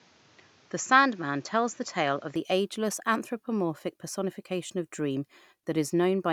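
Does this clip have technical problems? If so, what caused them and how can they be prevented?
Yes. From the start to 2.36 s the speech is band-limited, with nothing above 7.6 kHz, so it sounds duller and boxy, with a faint added noise floor well below the speech. At 2.36 s the full bandwidth returns with no gap and no obvious level jump. This is likely an input switched to a poorer device, a narrower-band microphone or headset path that carries its own tone and noise. To prevent it, lock the recording input to a single device before capture starts.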